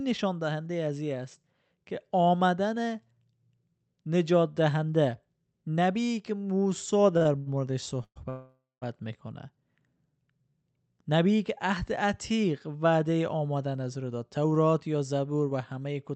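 Short stalls from a late packet at 7.17–7.23, 7.23–7.27 and 7.37–7.48 s stretch the last sound by 36, 25 and 86 ms. They show as smeared, repeated harmonics on a spectrogram.

Call audio freezes follow at 8.04–8.18 and 8.30–8.84 s. A fading buzz leads into flat silence of 60 and then 190 ms, likely from packets held up on the network. The waveform decays to a near-zero line.

A jitter buffer speed-up from 13.33 to 16.11 s runs the speech about 8% faster at unchanged pitch. It trims roughly a fifth of a second, visibly compressing syllable spacing. The Opus call path's 8 kHz cut-off stays visible throughout.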